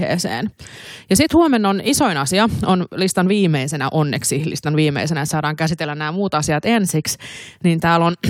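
No audible faults anywhere in the speech recording; nothing to flag.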